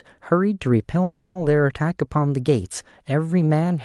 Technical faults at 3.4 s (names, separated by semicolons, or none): none